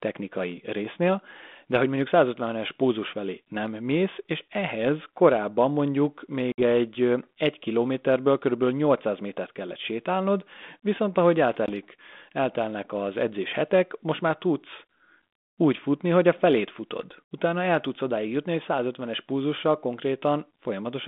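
Packet loss on the ADPCM call cuts a hard-edged silent gap of 60 ms at 6.52 s, after "és ehhez korábban mondjuk", and 20 ms at 11.66 s, after "kellett sétálnod viszont ahogy". Speech returns slightly distorted while the decoder's predictor resynchronises.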